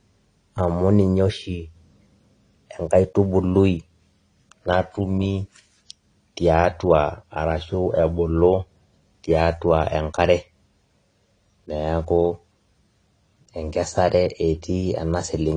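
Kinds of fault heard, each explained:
Low-bitrate audio saved at a high bitrate: throughout the speech, nothing sounds above 10.2 kHz, leaving a dull, band-limited top end with the leftover artefacts of the earlier compression, even though the file carries the weight of a generous MP3 encode. The likely cause is an earlier low-bitrate encode, pointing to AAC-LC at around 32 kbit/s, later re-encoded to MP3 at roughly 192 kbit/s. The second pass could not restore what the first discarded.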